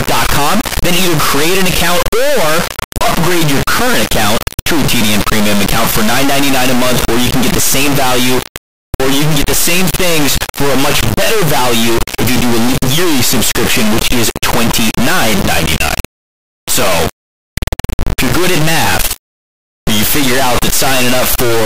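From start to finish, an integer read as float error: 32-bit integer samples are being decoded as 32-bit float, so most values become either near zero or far beyond full scale. The speech turns into an extremely loud, buzzing square wave that drops to silence in the quietest passages.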